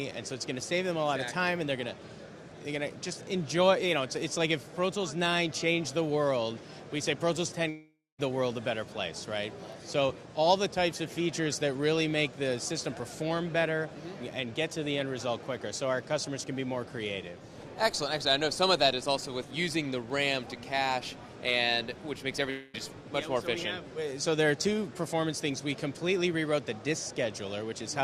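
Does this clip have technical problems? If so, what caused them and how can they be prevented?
Yes. The clip has two long network dropouts, at 7.69 to 8.20 s and 22.50 to 22.77 s. About 0.5 s and 0.24 s of audio never arrived, likely lost in transit. The receiver stretched the last sound into a fading buzz or hiss. In the first gap this gives way to about 0.22 s of silence, visible as a smeared, decaying band and then a blank column on the spectrogram and a flat waveform. The second gap fades without reaching silence. Adding jitter buffering and forward error correction on a more stable network connection would prevent this.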